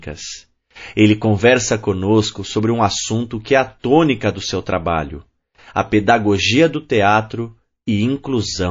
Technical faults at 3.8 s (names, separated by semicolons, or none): MP3 compression; pre-echo